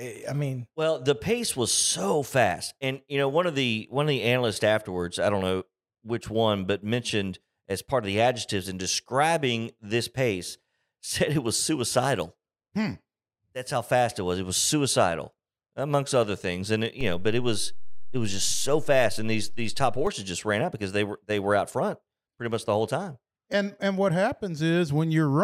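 A low thump lands in this speech recording at 17.01 s, right after "other things and it", and a second thump follows at 20.07 s, just before "just ran out because", while the talking itself carries on unchanged. This is a DC step: the waveform's zero line jumps by about -26 dBFS and holds there for roughly three seconds before stepping back, as happens when a converter recalibrates or an input carrying an offset is switched in.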